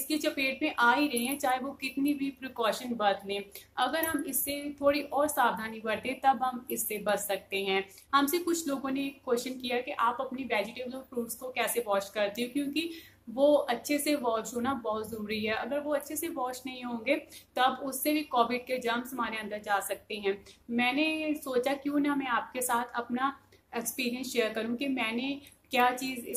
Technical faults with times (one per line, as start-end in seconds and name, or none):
none